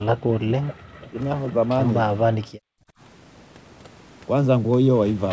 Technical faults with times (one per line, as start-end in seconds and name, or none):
0.00-1.18 speech suppressed in double talk
1.48-1.52 echo leak
2.44-2.99 background gated by the echo canceller